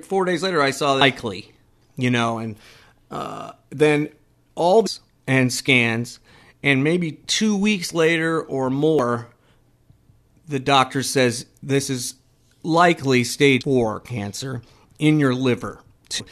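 Damaged data in a compressed stream makes the decoder lose sync, giving brief glitches in the speech at 1.00, 4.86–4.88, 8.99, 13.61–13.63 and 16.19 s.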